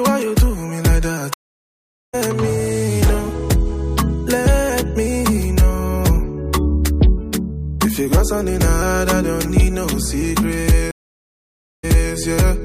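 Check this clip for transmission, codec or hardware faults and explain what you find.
There are two stream reconnects. At 1.34 to 2.15 s the audio drops out for about 0.8 s and picks up roughly 0.7 s further along, so a chunk is simply skipped. At 10.91 to 12.14 s there's a gap of about 0.92 s, and this time it comes back 0.3 s earlier, so you hear a short stretch repeated. In both cases the connection broke, the player sat silent, then reconnected and started a fresh decoder mid-stream.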